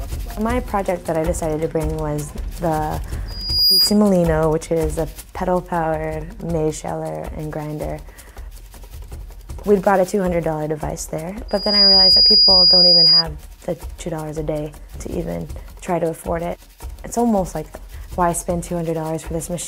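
Loudspeaker feedback squeal occurs twice, at 3.27 to 3.98 s and 11.48 to 13.24 s. Each time, a single 4.9 kHz tone swells up within half a second to about 10 dB above the audio. A microphone picks up its own loudspeaker, and loop gain exceeds one there.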